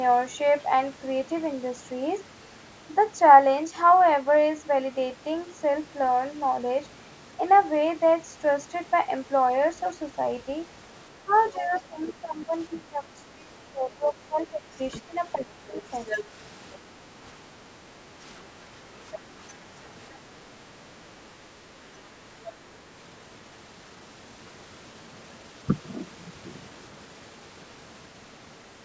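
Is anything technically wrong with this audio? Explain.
Yes. Two related echo-control faults occur, the first during a stretch where both ends of the call talk at once.

Speech suppressed in double talk, from 11.23 to 15.84 s: the echo canceller likely could not tell the local talker apart from the loudspeaker echo, so it attenuated everything it picked up. The speech dips in level, by around 20 dB at its deepest, and breaks up in patches that add up to about three seconds within that window.

The other side's voice leaking through, at 12.02 to 12.12, 12.76 to 12.80, 15.51 to 16.24, 16.73 to 16.78, 19.13 to 19.19 and 22.44 to 22.56 s: the device's speaker output likely reached the microphone and was not fully cancelled. A second voice is heard in short scraps, mostly faint, at very roughly 15 to 30 dB below the talker. The exception is the 15.51 s stretch, which is nearly as loud as the talker and lasts about three quarters of a second.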